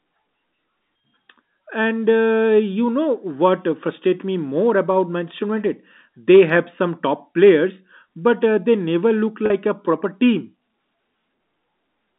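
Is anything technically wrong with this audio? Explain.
Yes. Packet loss with pitch repetition occurs at 9.46 to 9.50 s, a gap of about 40 ms, which fits two lost 20 ms packets. The receiver filled the hole by repeating the last pitch period of the speech and fading that copy down rather than leaving silence. Because the loss is this short, it is heard as a brief buzzy hold on the sound, set against the narrow 200 Hz to 3.7 kHz band of the G.711 telephone line.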